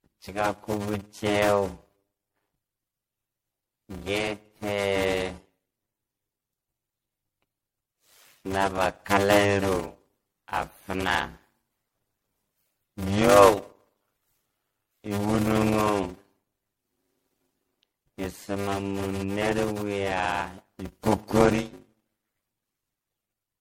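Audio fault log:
throughout: block size mismatch (padded). Each block fills only part of the slot the next stage reads, and the rest is zeros. A short gap recurs 100 times per second as a steady buzz. The speech runs at 0.533 times normal speed at roughly its usual pitch, which fits 256-sample blocks read into larger ones.
throughout: generation loss. The speech sounds swirly, smeared and hollow, with blurred onsets and nothing above 16.5 kHz. That is more damage than a single pass at 64 kbit/s would leave. The likely cause is repeated MP3 re-encoding, around seven passes, each quantising on a shifted frame grid.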